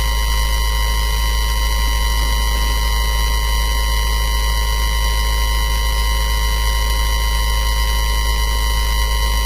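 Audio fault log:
throughout, low-delay AAC compression: the sound is heavily roughened and grainy, with noise filling the gaps between tonal components and nothing above 15.6 kHz. The likely cause is AAC-ELD, whose short frames resolve pitch poorly; the damage fits roughly 24 kbps.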